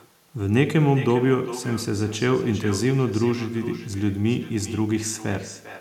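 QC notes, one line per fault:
Throughout: echo with no canceller, speech shadowed roughly 0.4 s later by a thinner copy about 16 dB down, returned from a far-end loudspeaker rather than room reverb.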